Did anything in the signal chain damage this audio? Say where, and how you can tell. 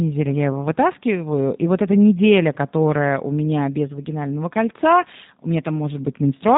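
Yes. The damage comes from the codec stage: the speech passed through a G.729 codec, and the artefacts run through the whole clip rather than appearing at any one moment. The voice is rebuilt from a vocal tract filter, a pitch predictor and a few coded pulses per frame, which fits a rate of about 8 kbit/s. You can tell because nothing survives above 3.8 kHz, and the voice has a plainly audible rough, synthetic, slightly buzzy texture.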